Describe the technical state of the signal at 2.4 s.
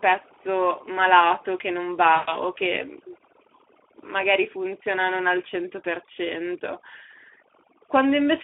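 VoIP packet loss concealed by the speech codec spans 2.15 to 2.41 s, between "malato che non" and "o che". About 120 ms of packets never arrived, which fits roughly six lost frames. The decoder filled the gap by repeating its last pitch and filter at falling gain, so the sound smears into a fading buzzy tone or coloured noise, and 2.4 s sits near the end of the lost stretch.

Throughout, the Speex codec runs at a setting that points to about 11 kbps, with the signal confined to a 300 Hz to 3.4 kHz telephone band. The codec damage is plainly audible: the thin excitation leaves the speech hoarse and noisy.

Overdone noise removal is also present. An aggressive suppressor is pulling down any band near its noise estimate, leaving a lowered background broken into twinkling specks.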